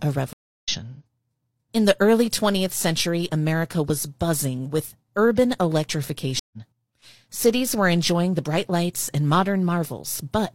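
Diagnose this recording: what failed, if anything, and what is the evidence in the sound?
Network stage: a stream reconnect happens twice. The speech cuts to silence for 306 ms at 0.33–0.69 s and 132 ms at 6.39–6.58 s. A fresh decoder then rejoins the live stream roughly 0.2 s and 0.15 s later, skipping material. Waveform and spectrogram both show blank gaps with a faded-in restart.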